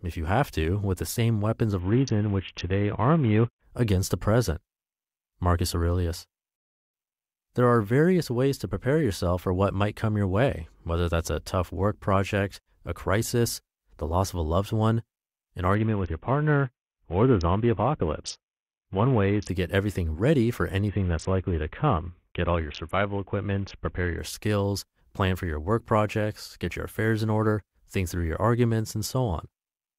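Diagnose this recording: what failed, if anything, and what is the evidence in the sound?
The codec stage failed on the Bluetooth link: a Bluetooth SBC bit pool drop at 1.79–3.63 s (after "with the same weapons"), 15.74–19.49 s and 20.88–24.18 s. Treble dulls and gritty noise rises as upper sub-bands starve, consistent with a bit pool near 5, about 54 kbps.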